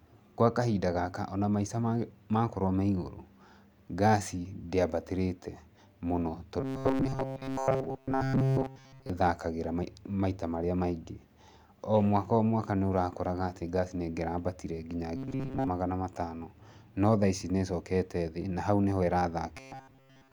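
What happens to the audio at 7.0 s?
At 7.0 s the speech is in a stretch of robotic sound from repeated short buffers, running from 6.61 to 9.10 s. It becomes a rigid, metallic buzz near 133 Hz. The likely cause is audio arriving too seldom, so roughly 7.5 ms fragments are replayed and most real audio is skipped.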